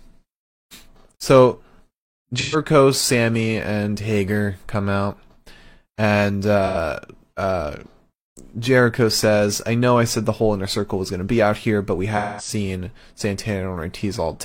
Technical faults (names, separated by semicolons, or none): AAC frame loss with concealment